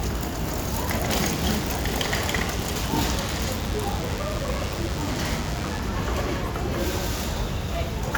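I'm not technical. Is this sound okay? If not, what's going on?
No. From 1.08 to 5.79 s a thin, steady buzz sits beneath the sound. This is DECT cordless phone buzz: a nearby cordless phone or its base sends a radio pulse 100 times a second, and the recording equipment picks it up as a hum.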